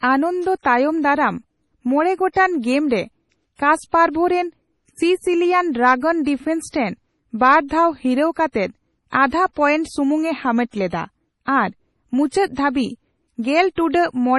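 Throughout the speech, heavy MP3 compression is the likely cause of a watery, swirling texture. Nothing is present above 11.5 kHz, and weak spectral detail flickers between frames. Damage this severe fits a very low bitrate, around 32 kbps.

Pre-echo appears at 6.69 to 6.74 s and again at 12.28 to 12.33 s, just after "ᱦᱟᱢᱮᱴ ᱞᱮᱫᱟ ᱟᱨ". In each case a sharp onset sits late in a transform block, so quantisation noise spreads backwards for about 50 ms as a short hiss and softens the attack.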